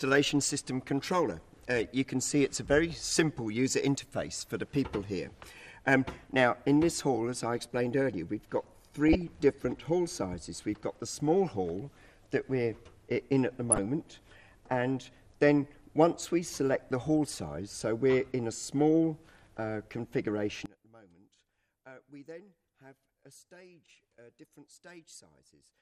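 MP2 compression runs from start to finish: the upper range sounds dull and the remaining bands carry a granular, gurgling roughness, likely from MPEG Layer II coding with too few bits to keep the top sub-bands switched on, which fits a rate around 80 kbps.

DAB burbling appears at 9.08 to 9.22 s and again at 13.69 to 13.78 s: brief blips of noise in individual sub-bands. Bit errors on the order of a few tenths of a percent slipped past error correction into the coded data, corrupting what sounds like a handful of frames each time.

One channel inverted affects the section from 20.66 s to the end: when heard in mono the sound drops by about 24 dB, leaving a faint copy. The likely cause is reversed polarity on one stereo channel, so the content common to both channels cancels and only their difference remains.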